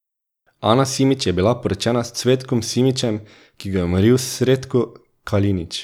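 Speech recording, nothing technically wrong with it; there's no fault to report.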